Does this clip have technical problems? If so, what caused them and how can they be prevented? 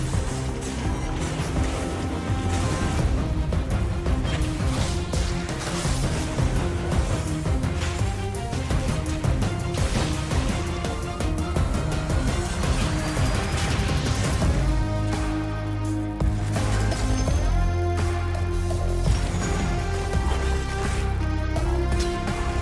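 Yes. Throughout the clip, a buzz at 100 Hz rides on the signal. It comes from a resampler restarted on every block, which points to a 48 kHz to 24 kHz conversion run on isolated 10 ms blocks, leaving an error at each block edge. To prevent it, keep one resampler instance running across the whole stream so its filter state carries from block to block.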